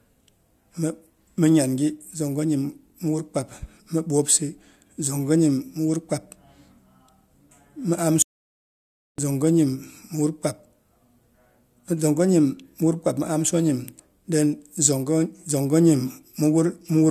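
An audio dropout to silence runs from 8.22 to 9.18 s, close to a second of speech lost. The sound stops mid-flow into silence, with no room tone left, then resumes abruptly, likely because the input signal was lost while recording continued writing silence.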